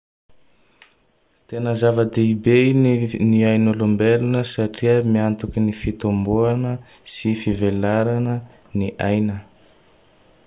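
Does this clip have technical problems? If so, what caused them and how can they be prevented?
No, the speech signal stays intact and continuous throughout, with no technical faults to trace to a cause or to prevent.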